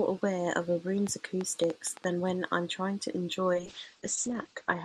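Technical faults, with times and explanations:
1.07 to 2.05 s, train of clicks: a run of roughly seven sharp, similar-looking pulses at an uneven pace, averaging about 6.2 per second, lands on top of the speech and stands well above it, peaking at about 10 dB over the signal. They tick through the sound and through any gaps alike, since they are added from outside rather than shaped by the voice. The likely cause is interference from nearby equipment or a faulty connection or power supply.
3.55 s to the end, call bitrate drop: the encoder's budget falls from 64 kbps to 10 kbps, staying at the bottom for about 1.22 s, so the remaining speech is coded far more coarsely. At that rate the audio bandwidth also shrinks from 20 kHz to 8 kHz, removing the upper frequencies. The result is speech that turns muffled and rough, with a watery texture, and it does not recover before the clip ends.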